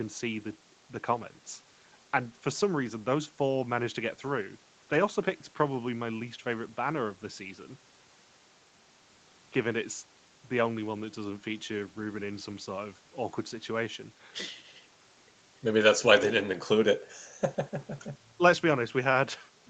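The clip is speech, and nothing is technically wrong with it.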